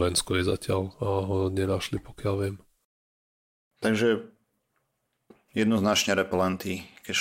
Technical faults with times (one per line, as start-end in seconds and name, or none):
none